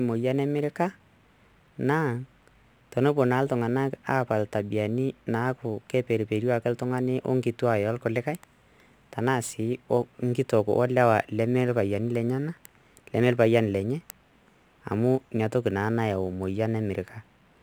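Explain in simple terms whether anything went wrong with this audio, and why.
Crude rate conversion runs throughout this speech: a gritty, off-key fizz that tracks loud and bright sounds, unlike ordinary distortion, which would follow the voice's own pitch.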